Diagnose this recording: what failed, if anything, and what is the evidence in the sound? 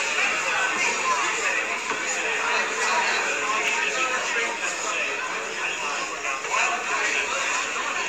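At the driver or buffer stage, new audio missed its deadline at 3.68 s, and the device fell back on a repeated buffer, playing its last block two extra times. Each block lasts about 1.45 ms, which fits a 64-sample buffer, so the same sliver sounds three times back to back with hard joins between the copies. At this size the repeats fuse into a brief click or buzz, and a few milliseconds of the following audio are pushed out or lost.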